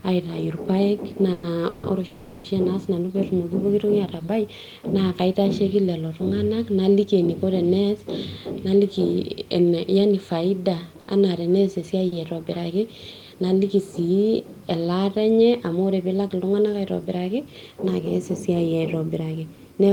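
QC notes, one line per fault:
1.33–1.45 s, 1.69–1.85 s, 2.05–2.46 s: call audio freeze. Sound stretches into a fading buzz or hiss for 100, 140 and 390 ms, then resumes intact before "naa sinanu". Likely delayed packets drained the jitter buffer.
8.65–10.37 s: jitter buffer speed-up. The receiver trims pitch-period slices, roughly 150 ms in total, to shed excess buffered delay. Speech runs about 108% fast, hurried but same pitch.
11.01 s and 12.08 s: short stall from a late packet. A missing packet emptied the buffer, so the last sound is held 70 and 40 ms with a slight buzz or dip.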